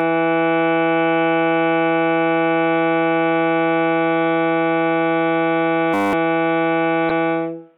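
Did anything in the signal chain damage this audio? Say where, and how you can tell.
Yes. From 5.94 to 6.13 s the music freezes into a steady 100 Hz buzz: one 10 ms fragment repeats 19 times. This is a system hang loop at the driver or buffer stage. The host stalled while the hardware kept replaying its ring buffer, losing roughly 200 ms of music.

From 7.07 to 7.11 s a brief glitch breaks into the music. This points to damaged data in a compressed stream, at the codec or storage stage. Corrupted bytes made the decoder misread frames and lose sync until it found the next valid frame header.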